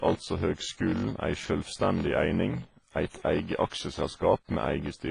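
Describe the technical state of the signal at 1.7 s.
At 1.7 s the speech carries a block size mismatch (padded), and it runs the full length of the clip. One stage writes shorter blocks than the next stage reads. The gap in each block is filled with silence. This repeats at 46.9 Hz, which fits a 1024-sample read block. The result is a steady buzz at that rate. Playback runs at 0.861 times normal speed, so the speech is slowed. Its timbre stays.

The same moment also shows heavy codec damage across the whole clip. Nothing is present above 10.5 kHz. The sound is ringing and washy, with a hiss that breathes with the speech. The cause is likely WMA compression at a low bitrate, around 24 kbps. Its long transform blocks spread quantisation noise over tens of milliseconds. Weak spectral lines are dropped to zero.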